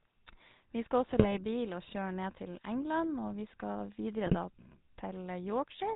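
It's a speech recording carried through the GSM full-rate codec the whole way, and it's plainly audible: everything above 4 kHz is gone, and the voice has that buzzy, gravelly edge from the coarse pulse excitation, which fits the 13 kbps full-rate codec. On top of that there are GSM bit errors from 1.09 to 1.36 s and again from 4.26 to 4.37 s. Corrupted filter, pitch or gain values reach the decoder, so those stretches break into squawks, pops and gargling as the spectrum and level jump from frame to frame.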